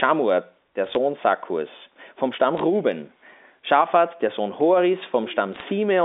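Bit errors on a digital phone line occur at 0.87 to 0.97 s, 2.57 to 2.61 s and 5.53 to 5.62 s. Each flipped bit corrupts a single sample, and hits on high bits make sharp ticks that add up to crackle over the speech.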